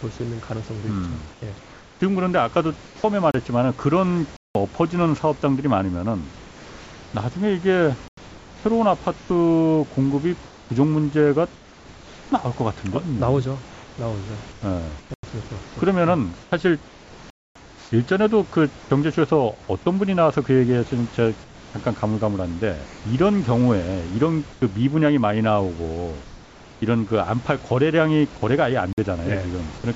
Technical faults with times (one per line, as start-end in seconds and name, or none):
1.32-3.04 comfort noise in place of the background
3.31-3.34 block of digital silence
4.37-4.55 block of digital silence
6.36-7.14 comfort noise in place of the background
8.08-8.17 block of digital silence
9.18-12.32 comfort noise in place of the background
13.72-18.90 comfort noise in place of the background
15.14-15.23 block of digital silence
17.30-17.55 block of digital silence
21.44-23.04 comfort noise in place of the background
24.52-24.62 comfort noise in place of the background
28.93-28.98 block of digital silence